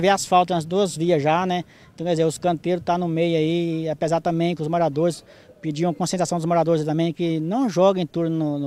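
No technical faults can be heard at any point in the recording, and the signal holds steady throughout.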